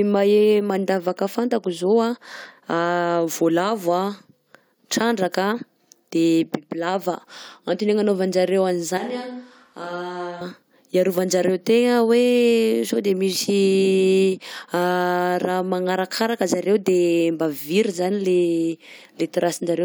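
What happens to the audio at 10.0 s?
At 10.0 s the speech sounds suddenly hollow and roomy, with thinner bass, a level drop of roughly 10 dB and room noise about 40 dB below the voice, from 8.98 to 10.41 s. This is likely a switch to a distant microphone after the close one drops out.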